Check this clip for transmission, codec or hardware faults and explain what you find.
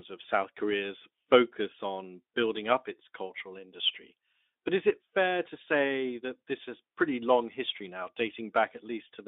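No transmission, codec or hardware faults turn up in this clip.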